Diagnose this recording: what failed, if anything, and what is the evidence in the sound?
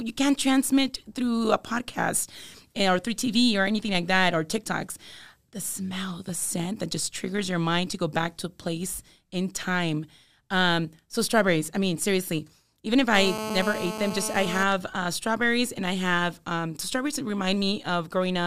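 The analogue audio wiring picked up GSM phone buzz. A nearby 2G handset in an active call was transmitting in bursts about 217 times a second, and a junction in the audio circuit rectified those radio pulses into the signal. From 13.14 s to 14.64 s, between "mean seriously even if" and "uh strawberries and I", a hard, raspy 217 Hz buzz rich in harmonics runs steadily beneath the speech, about 7 dB below it and unrelated to it.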